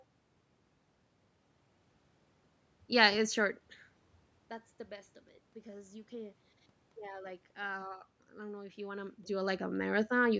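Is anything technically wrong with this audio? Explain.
No, nothing technical is wrong with this speech. There is some background room noise, the level shifts around 3.5 and 8.5 seconds as the talker moves relative to the microphone, and the call's microphone processing leaves nothing above 8 kHz, all of which is normal.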